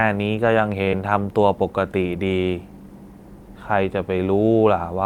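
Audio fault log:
0.82–0.88 s short stall from a late packet: the jitter buffer emptied, so the last sound is held for 41 ms. On a spectrogram it shows as a frozen stretch. Nothing is lost.
0.89–0.93 s short concealed packet loss: 40 ms never arrived and was filled by continuing the previous sound. It shows as a smeared, blurred stretch that crossfades back into sharp detail.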